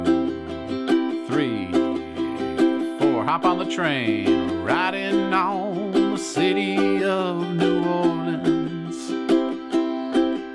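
No technical faults can be heard anywhere in this recording. At no point does the audio depart from its ordinary course.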